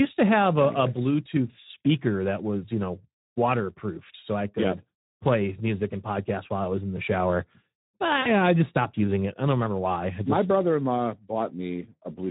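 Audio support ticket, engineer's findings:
Speex codec throughout, at a low bitrate setting, plausibly around 11 kbps. Too few bits for the CELP excitation, so speech comes out hoarse and noisy, with audible codec damage across the whole clip.

VoIP packet loss concealed by the speech codec, 8.21–8.29 s. About 40 ms missing, fitting two 20 ms frames dropped. Decoder extrapolated from its last pitch and filter with falling gain, giving a brief, fading smear; speech stays weakened briefly afterwards.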